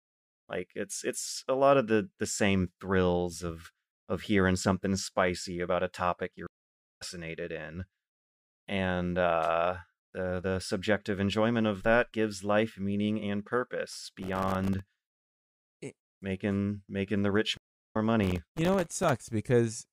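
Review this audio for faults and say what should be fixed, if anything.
Two stream reconnects break this speech. At 6.47 s, after "about a topic you're", the sound drops out for 525 ms and comes back roughly half a second further on, because the player reopened the connection and restarted its decoder mid-stream. The same happens at 17.57 s, after "making making the rich": 365 ms of silence, then a jump of about 0.3 s. A more robust client buffer and automatic resume from the last received position would prevent this.

Processor overload crackle runs from 13.91 to 15.41 s, after "gives life meaning and", and again from 18.24 to 19.10 s. Buffers of around 1.5 ms were repeatedly missed and left as short silent gaps, many in each burst, producing a gritty tearing over the speech. Larger audio buffers or reduced competing CPU load would prevent it.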